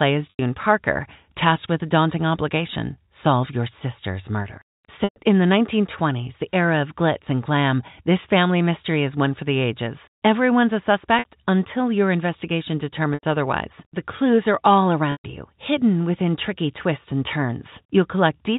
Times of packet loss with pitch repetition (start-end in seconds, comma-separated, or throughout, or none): 0.30-0.39, 5.04-5.16, 11.19-11.25, 13.14-13.23, 15.12-15.24